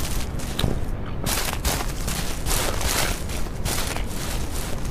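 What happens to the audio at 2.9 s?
Nothing goes wrong at 2.9 s, and the audio plays through that moment intact.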